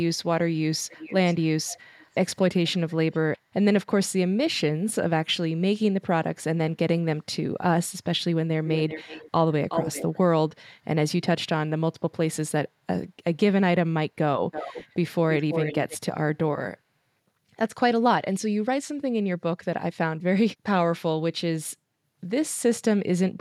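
A far-end echo canceller likely left part of its loudspeaker pickup uncancelled, so an echo leak sends delayed copies of the speech back at 0.88–2.15, 2.66–3.19, 8.66–9.31, 9.69–10.18, 14.51–14.94 and 15.3–15.98 s. The lag shrinks from 433 to 371 to 320 ms. The copies go from faint early on to nearly as loud as the speech by the end.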